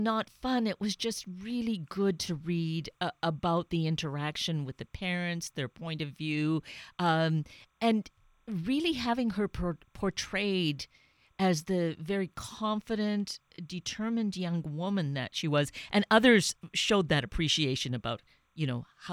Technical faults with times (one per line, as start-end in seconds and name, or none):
0.00-19.12 timecode bleed